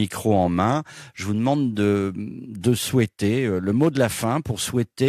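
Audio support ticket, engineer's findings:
No faults found in recording.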